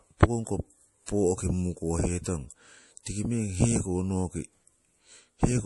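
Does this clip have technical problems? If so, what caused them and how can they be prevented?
Yes. Throughout, the speech sounds watery, and nothing reaches above 11.5 kHz. This is likely MP3 compression at a low bitrate, which fits about 48 kbps. Encode at a higher bitrate or keep an uncompressed copy.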